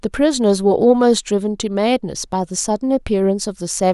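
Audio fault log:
No fault is heard in this speech clip.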